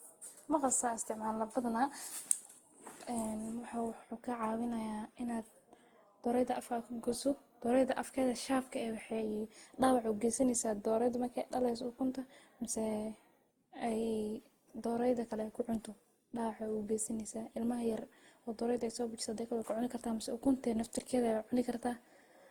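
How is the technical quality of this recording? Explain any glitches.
The quality is compromised throughout by generation loss. The speech was likely decoded and re-encoded around seven times with a lossy codec, the character fitting Opus at about 48 kbit/s; each pass requantises on a shifted frame grid, so swirly, hollow smearing accumulates and consonant attacks blur.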